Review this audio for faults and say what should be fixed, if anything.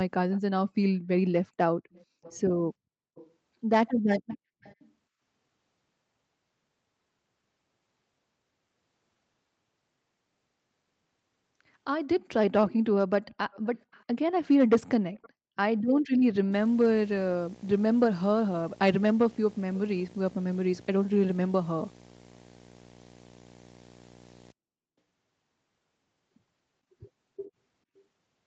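A faint, delayed repeat of the speech trails the talker by about 0.45 s, sitting roughly 25 dB down at first and growing fainter later. It appears from 0.31 to 3.31 s, 4.28 to 4.91 s, 12.67 to 14.04 s, 15.16 to 15.29 s, and briefly at 27.96 s. This is likely an echo leak: a far-end loudspeaker fed the microphone, and the echo canceller let some of that copy return. To prevent it, the far end should use headphones or fix its echo cancellation.

From 16.52 to 24.52 s a steady buzz at 59.94 Hz runs under the audio, with gritty hash above it and a thin whine near 15.7 kHz. It sits about 25 dB below the signal. This is video or display buzz: the field rate sets the buzz and the line scan sets the whine, as a screen or video cable couples into the audio wiring. To prevent it, reroute or shield the audio cabling away from the display and its video leads.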